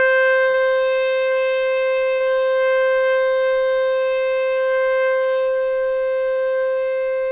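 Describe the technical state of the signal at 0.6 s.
A short concealed packet loss sits just before 0.6 s, from 0.50 to 0.56 s. About 40 ms of the music never arrived, and the receiver filled the hole by extending the preceding sound before fading back in, giving a brief smeared wobble. On a spectrogram the preceding sound carries on across the gap, all below the call path's 4 kHz ceiling.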